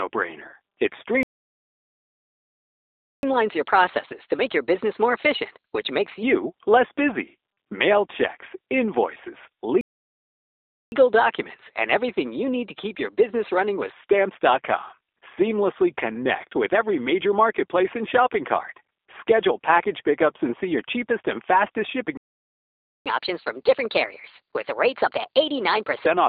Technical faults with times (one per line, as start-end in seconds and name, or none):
0.00-26.28 G.729 codec
1.23-3.23 playback stall
3.23-6.23 catch-up at higher speed
9.81-10.92 playback stall
10.92-13.92 catch-up at higher speed
22.17-23.06 playback stall
23.06-26.06 catch-up at higher speed